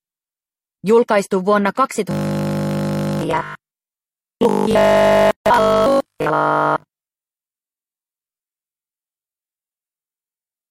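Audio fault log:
2.11–10.70 s, robotic sound from repeated short buffers: a rigid metallic 50 Hz buzz runs through the whole span, following the original only roughly, likely from 20 ms buffers repeated while fresh audio was skipped.
5.31–5.46 s, gap at a join of encoded pieces: a 150 ms hole with smeared edges, where padding from separately encoded segments was never trimmed.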